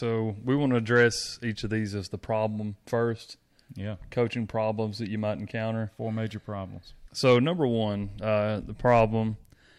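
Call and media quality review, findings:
Resampler restarted on every block, 4.8–6.3 s: regular ticks at 10 Hz over the speech, one per 100 ms block. Each block converted in isolation, consistent with a 48 kHz to 44.1 kHz stage, so every block edge carries a small discontinuity.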